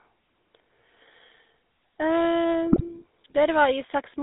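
From the start the speech runs through the GSM full-rate codec, and the damage is plainly audible: a buzzy, gravelly roughness on every voiced stretch, confined to a band of roughly 250 Hz to 3.7 kHz. The coder rebuilds the voice from a vocal-tract filter fed by a sparse, regularly spaced pulse train, so the texture grates rather than warbles, which sets it apart from the swirly artefacts of modern transform codecs. The sound fits a 13 kbps GSM stream.

From 2.72 to 3.00 s, GSM bit errors break in. Corrupted filter, pitch and gain values reach the decoder and bend the spectrum frame by frame. The voice squawks, pops and gargles in short, jagged bursts, which fits about four damaged frames and a bit error rate of a few percent. The frames are decoded wrongly rather than dropped, so there are no gaps or smoothed-over concealment, unlike packet loss.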